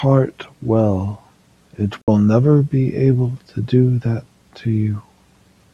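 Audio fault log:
2.01–2.08 s: AAC frame loss with muting. The speech drops into a 64 ms silent hole, consistent with about three lost frames whose spectrum the decoder zeroed, with overlapping windows fading the edges.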